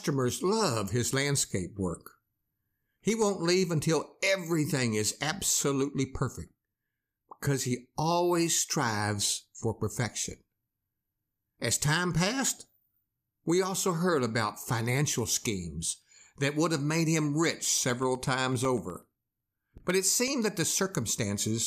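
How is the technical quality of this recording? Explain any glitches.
The recording has one glitch, a short run of periodic USB or driver dropouts from 17.65 to 20.28 s. Something in the system stalls the USB bus or audio driver every 0.125 s, and each stall drops roughly a millisecond of the speech, which is replaced with silence. Because the gaps arrive eight times a second, the listener hears a steady train of about twenty ticks, audible only while the talker is producing sound.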